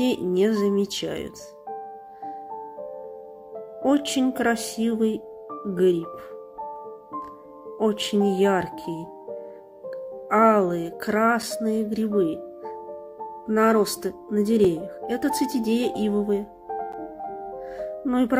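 At 11.42, 14.64 and 16.92 s, blocks of digital silence (5, 3 and 10 ms) drop the signal abruptly to silence, giving ticks, flat waveform gaps and thin broadband spectrogram lines.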